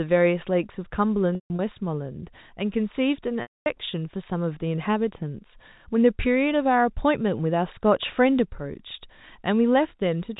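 At 1.35 s, packet loss with pitch repetition begins and runs to 1.59 s. About 180 ms of audio is missing, scattered over that stretch. The longest gap lasts 150 ms. The receiver fills each hole by repeating the last pitch period. It sounds like a held buzz that fades toward silence. At 3.42 s a solid 240 ms gap follows, ending at 3.66 s. It fades out, then speech cross-fades back. The narrow G.711 telephone band is audible throughout.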